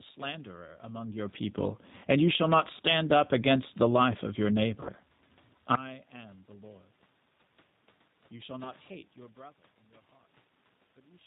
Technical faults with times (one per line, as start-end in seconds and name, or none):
0.00-11.27 G.729 codec
1.95-2.84 automatic gain falling
2.49-3.65 automatic gain rising
4.80-4.90 VoIP packet loss concealed by the speech codec
8.64-8.72 VoIP packet loss concealed by the speech codec